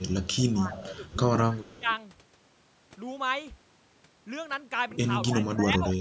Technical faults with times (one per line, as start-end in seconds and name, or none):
0.00-1.16 echo leak
0.54-0.71 speech suppressed in double talk
0.98-1.04 speech suppressed in double talk
1.52-1.88 speech suppressed in double talk
1.65-1.96 echo leak
5.29-5.86 speech suppressed in double talk
5.90-5.95 echo leak